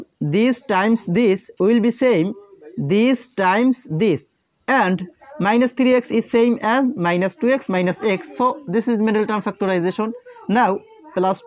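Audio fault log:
No faults heard anywhere in this audio.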